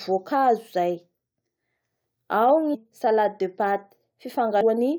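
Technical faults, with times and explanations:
2.73–2.75 s and 4.61–4.63 s, damaged data in a compressed stream: at both points a short stretch of the encoded speech stream arrived corrupted, so the decoder could not read those frames correctly and lost its place in the bitstream until it found the next valid frame header. Each time the output is a brief break, heard as a chirp, click or short hole, lasting about 20 ms, where the damaged frames stand in place of the intended speech.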